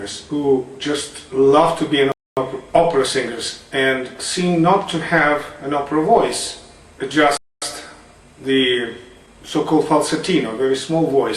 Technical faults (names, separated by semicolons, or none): gap between chunks